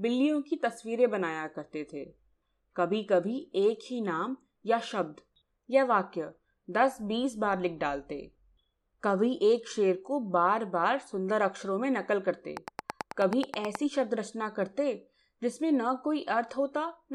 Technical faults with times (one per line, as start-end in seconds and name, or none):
12.57-13.76 train of clicks